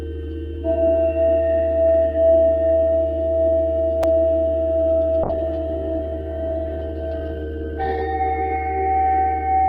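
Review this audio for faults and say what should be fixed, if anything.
At 4.03 s there is a repeated buffer. Fresh audio was late, so the device played its last block again, once. The block is very short, about 5 ms, which fits a 5 ms buffer. So the repeat is a click rather than a stutter, with a hard join where the copy restarts. Roughly 5 ms of real audio is lost in its place. To prevent it, give the playback path more headroom, with a larger buffer or a higher-priority audio thread.

From 5.25 s to 8.09 s there is a call bitrate drop. The sound turns rough and watery, and the top end goes dull. The change points to the encoder falling from about 48 kbps to about 11 kbps after the bandwidth estimate collapsed. It sits at that floor for about 2.8 s. At such a low rate the codec quantises coarsely and trims high frequencies until the rate climbs back. To prevent it, tune bandwidth estimation to react less sharply and set a higher minimum bitrate.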